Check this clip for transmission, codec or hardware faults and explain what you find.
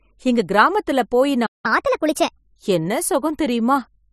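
Two playback faults appear, one straight after the other, following "எங்க கிராமத்துல போயி".

From 1.46 to 1.66 s there is a playback stall. The speech cuts out for about 180 ms, most likely because the player ran short of data, and it shows as a flat, empty gap in the waveform.

From 1.66 to 2.38 s there is catch-up at higher speed. The player resamples its backlog at 1.25 times normal speed, raising the pitch by around four semitones. On a spectrogram the harmonics sit visibly higher and closer together in time.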